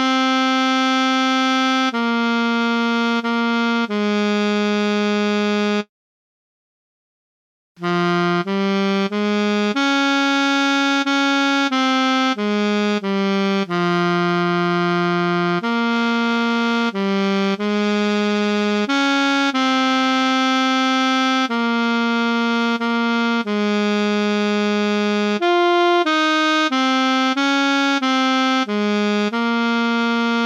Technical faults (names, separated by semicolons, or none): periodic clock jitter